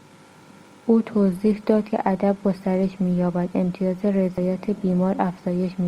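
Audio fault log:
1.16 s to the end: adaptive stream at a lower bitrate. The sound suddenly gets more codec artefacts, which points to a step down from about 64 to 24 kbit/s Opus. Unlike a dropout or skip, nothing goes missing at the switch.
1.93 s and 4.38 s: audio missing between chunks. About 50 ms of speech vanishes at each point, and the two sides are joined with no silence, so the sound jumps forward rather than pausing. The regular spacing likely comes from 2.5 s processing chunks losing a sliver at each boundary.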